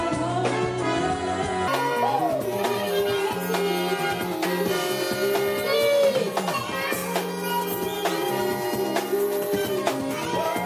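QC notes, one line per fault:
1.68–10.66 s, wrong sample rate: from here to the end everything runs about 1.45 times too fast and sits roughly 6.45 semitones high, which fits 22 kHz material being played out at 32 kHz with no conversion, so speed and pitch jump together.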